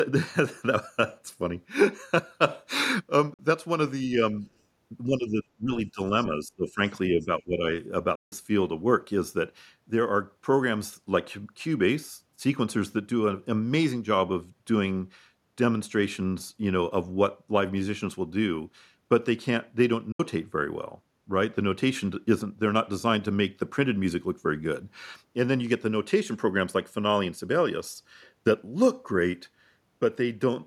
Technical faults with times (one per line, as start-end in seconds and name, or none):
3.34-3.39 Bluetooth dropout
5.06-6.00 speech suppressed in double talk
6.20-6.27 other side's voice leaking through
6.31-6.80 speech suppressed in double talk
7.11-7.64 speech suppressed in double talk
7.20-7.27 other side's voice leaking through
8.15-8.32 Bluetooth dropout
20.12-20.20 Bluetooth dropout